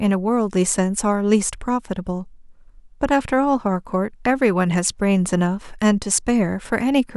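No technical faults can be heard anywhere in the recording; the signal stays continuous and stable throughout.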